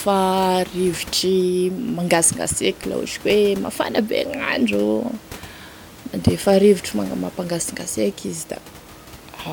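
No technical faults can be heard in this speech clip. A steady background of room noise sits about 21 dB below the speech, belonging to the recording space rather than to the system.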